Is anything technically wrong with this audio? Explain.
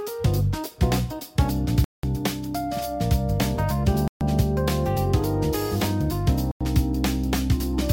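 Yes. The audio cuts to complete silence three times: at 1.84 to 2.03 s (190 ms), 4.08 to 4.21 s (130 ms) and 6.51 to 6.61 s (90 ms). Each gap is a Bluetooth stall, likely caused by interference delaying packets until the headphones' buffer empties and playback halts. The sound then resumes where it stopped or slightly later. A lost-packet dropout would skip or smear content, and a missing edit would jump ahead.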